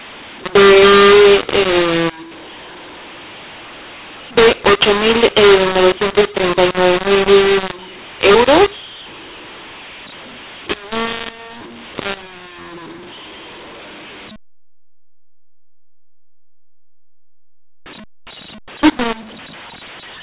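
Throughout, speech coded with G.711 A-law is decoded as mu-law, a case of mu-law and A-law mixed up. The mismatched companding curves scramble levels, making the speech harsh and distorted, and lifting quiet passages into noise, all capped at the telephone band's 4 kHz limit.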